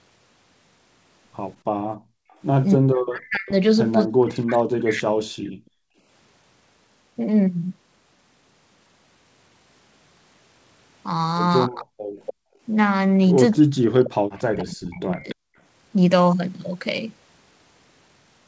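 At 1.97 s the room background is gated by the echo canceller: while the far-end loudspeaker plays, the canceller pulls the microphone down by about 40 dB until 2.31 s, so the ambience vanishes for about a third of a second. On a waveform the noise floor collapses to near silence; on a spectrogram the faint broadband haze turns to a blank band.

From 2.31 s to 4.88 s there is an echo leak, likely from a loudspeaker whose echo canceller let part of its own playback reach its microphone. A copy of the speech trails 291 ms behind, around 20 dB below the main level. On a spectrogram this shows as faint repeats of each harmonic stack shifted right by that delay.

Overlapping this, from 2.76 s to 5.37 s, speech is suppressed in double talk: with both sides active, the canceller likely could not separate talker from echo and turned everything down. For about two seconds in total the voice dips by as much as about 40 dB or breaks up, visible as chunks carved out of the envelope.

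The background is gated again from 5.65 s to 5.98 s, with the same 40 dB drop and silent gap.

The second episode starts with double-talk suppression from 11.67 s to 15.41 s, again pulling the voice down by about 40 dB in pieces. Inside it, an echo leak runs from 12.19 s to 15.35 s, again delayed 291 ms but louder, roughly 15 dB under the speech, so the shifted ghost traces are plainer on the spectrogram. Between 12.34 s and 12.62 s the background is gated once more, leaving a short flat stretch in the waveform.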